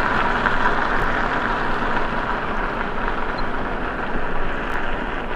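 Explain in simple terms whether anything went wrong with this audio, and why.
Two kinds of fault are audible. At 1.0 s and 4.7 s there are chunks out of order. In each case a 20 ms slice plays one slot late, making a brief jumbled moment. At 3.38 s a corrupt frame was decoded: one damaged block of compressed data was played anyway, producing a short chirp or blip.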